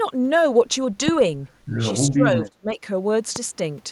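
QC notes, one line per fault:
2.11 to 2.78 s, speech suppressed in double talk: the voice sinks in pieces, about 30 dB at worst, for roughly 0.4 s in total, likely an echo canceller ducking during overlapping talk.
3.36 to 3.39 s, loud pop: one sharp pop sits around 10 dB above the speech, which carries on underneath, likely a voltage pulse from a plug, switch or driver glitch.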